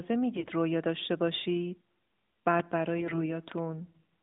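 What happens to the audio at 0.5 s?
At 0.5 s the speech is near the end of a burst of AMR bit errors running from about 0.36 to 0.53 s. Over that stretch of roughly 170 ms, which fits about eight 20 ms frames, around one bit in twenty arrives flipped. The corrupted bits sit in the weakly protected part of each frame, so the frames still decode. Their pulse positions and fine pitch, gain and spectral values come out wrong. Pitch and level roughly hold, but the voice turns hoarse, scratchy and gargly until the burst clears.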